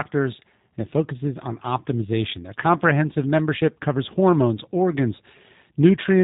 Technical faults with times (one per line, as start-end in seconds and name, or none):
0.00-6.23 G.729 codec